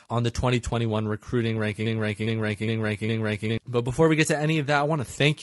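Low-delay AAC compression runs through this whole speech clip, leaving the voice rough and grainy with noise between harmonics, which fits AAC-ELD at around 32 kbps. A broken-record loop from 1.86 to 3.58 s repeats a 0.41 s fragment four times back to back, likely because the stream stalled and resent its last fragment, so the audio meant for that stretch is lost.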